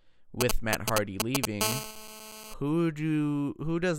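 GSM signalling bursts run from 0.41 to 1.45 s in this speech clip: a galloping dit-dit-dit of ticks and short buzzes at about 217 Hz, louder than the speech, from a nearby 2G phone's brief radio bursts being rectified by the audio circuitry. GSM phone buzz follows from 1.61 to 2.54 s as a steady, raspy 217 Hz buzz rich in harmonics, about 6 dB below the speech, consistent with that phone holding a call and transmitting continuously in 217-per-second bursts that the circuit demodulates.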